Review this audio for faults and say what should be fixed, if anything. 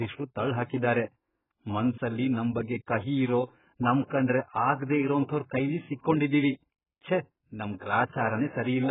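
AAC compression damage runs through the whole clip. Nothing is heard above about 3.8 kHz, and the speech sounds dull and smeared. The cause is likely heavy AAC-LC coding at a very low bitrate, near 8 kbps. That starves each frame of bits, so the encoder drops the upper band and quantises the rest coarsely. Encode at a much higher bitrate to keep the full spectrum.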